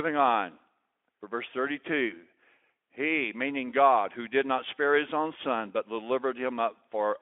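Nothing goes wrong anywhere in this speech, which simply sits in a narrow telephone-style band of roughly 300 Hz to 3.4 kHz as it comes through the Speex path.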